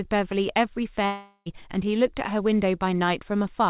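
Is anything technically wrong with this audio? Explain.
Yes. From 1.06 to 1.48 s there is what sounds like a long network dropout. The likely cause is that about 0.4 s of packets never reached the receiver, so that stretch of speech is gone. The receiver masked the hole by extending the last sound it had into a buzzy, fading fill lasting nearly the whole gap, with only a brief moment of silence before the speech resumes further on. Across the dropout, the band-limited call sound, with nothing above 4 kHz, carries straight through.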